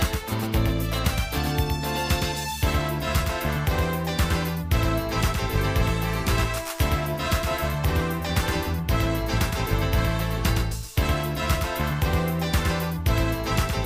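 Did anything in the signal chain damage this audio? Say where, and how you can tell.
Yes. A doubled audio track runs through the whole clip. Every sound arrives twice. A second, full-band copy trails the first by roughly a tenth of a second, about 5 dB quieter. The repeat carries no decay and no room colour, so it is not an echo from a space. It sounds like a clean duplicate. The likely cause is the same signal reaching the mix twice, through a second, slower capture or routing path in the driver or buffer stage.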